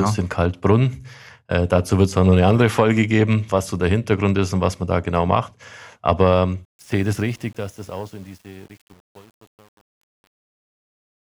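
Truncation distortion on a fade runs from 6.65 s to the end at 11.36 s, during a fade-out. Undithered, with steps suggesting 8-bit resolution, the fading speech turns gritty from 7.15 s.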